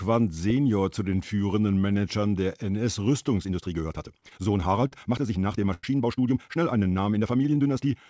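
From 3.40 s to the end at 8 s the speech suddenly runs about 1.75 times faster while its pitch stays put, a time-stretched section. The likely cause is software squeezing the audio to fit a shorter length by dropping short pieces, which makes it sound rushed. On a spectrogram the harmonic bands keep their spacing while syllables and pauses crowd together, and the waveform's envelope shows small seams where pieces were cut out.

Inside that stretch come two bursts of repeated stalls (stutter), where the jitter buffer ran dry and the receiver held on to the last sound until more arrived. From 4.21 s to 4.93 s there are five short gaps covering about 95 ms in total, or 13% of that span, the longest 45 ms. From 5.41 s to 5.84 s there are four gaps covering 126 ms, or 29% of the span, the longest 93 ms. Nothing is lost, but the speech drags and catches. The spectrogram shows brief smeared, repeated frames, and on the longer 93 ms gap the waveform fades away and then recovers.

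From 6.64 s to 7.93 s a jitter buffer slow-down adds about 130 ms to rebuild the buffer's reserve, playing at 91% speed by repeating single pitch periods or bits of pause. The sounds are drawn out at an unchanged pitch. On the waveform, identical periodic cycles repeat in a row, and in the spectrogram the harmonics stretch into flat segments. Throughout, the G.722 path leaves nothing above 8 kHz.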